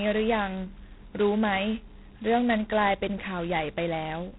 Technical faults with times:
0.00-4.38 G.726 ADPCM

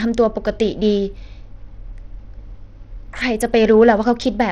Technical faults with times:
0.00-4.52 Bluetooth SBC compression

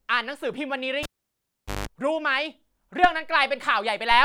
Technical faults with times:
1.03-1.87 cable pulled and plugged in

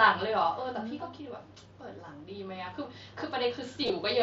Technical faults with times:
0.05-1.24 automatic gain falling
3.82-3.90 concealed Bluetooth headset packet loss

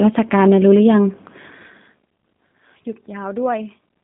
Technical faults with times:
0.00-4.04 G.729 codec

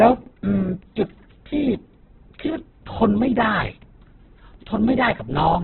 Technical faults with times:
0.00-5.64 Opus compression

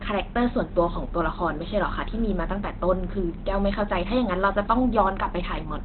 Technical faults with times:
0.00-5.85 Opus compression

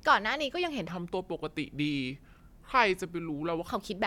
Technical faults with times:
0.88-3.68 section at the wrong speed

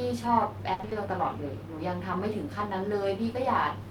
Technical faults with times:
0.73-0.97 repeated packet loss (robotic sound)

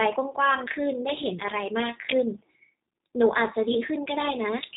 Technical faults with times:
0.00-4.77 G.729 codec

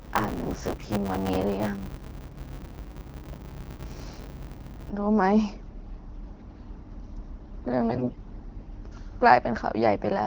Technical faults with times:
0.00-4.91 buffer tearing
7.89-8.18 AMR bit errors

